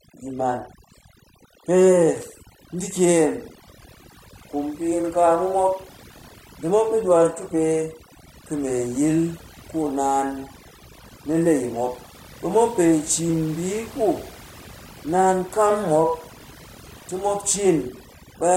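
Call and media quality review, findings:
Overdone noise removal, throughout. Noise suppressor set too aggressive, gating frequency bands near its noise estimate and taking low-level speech energy with them. Background drops and breaks up into twinkling specks.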